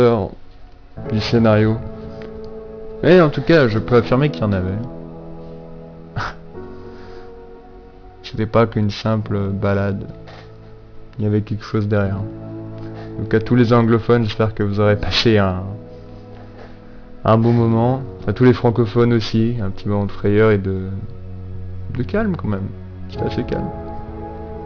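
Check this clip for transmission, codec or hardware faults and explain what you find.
One fault is present, throughout: aliasing. The rate was lowered without an anti-alias filter, which points to 44.1 kHz down to 11 kHz. Content above 5.5 kHz folds back below it as unrelated tones, roughly 20 dB under the signal. High end sounds gritty and metallic.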